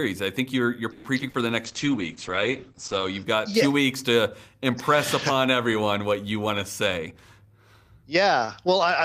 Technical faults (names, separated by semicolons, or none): call audio freeze; short concealed packet loss; jitter buffer slow-down; call bitrate drop; jitter buffer speed-up